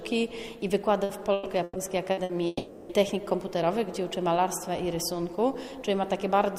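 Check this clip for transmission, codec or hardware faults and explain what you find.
Two transmission faults are audible, both network-related and close together in the first half of the clip.

From 1.03 to 2.32 s there is repeated packet loss (robotic sound). Five separate gaps occur, the longest about 120 ms, and each is filled by extending the preceding sound, so roughly a third of that stretch, about 420 ms in total, is synthetic. The result is choppy audio with pieces missing. On a spectrogram the concealed patches appear as short blocks of frozen, smeared horizontal bands. The waveform shows looped, repetitive cycles.

From 2.47 to 2.92 s the sound stops progressing and turns into a sustained buzz or hiss that fades, followed by a brief silence of about 10 ms before normal audio resumes, with the missing portion simply gone. This is likely a long network dropout, where nothing arrived and the receiver stretched the last sound across roughly 420 ms. 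A spectrogram would show a flat, unchanging spectrum decaying toward a near-empty gap. The waveform shows a tapering periodic envelope.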